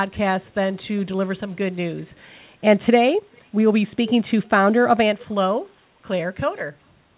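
Around 3.32 to 3.42 s there's a short echo leak, a very faint copy of the speech arriving 411 ms late, likely loudspeaker pickup the echo canceller missed.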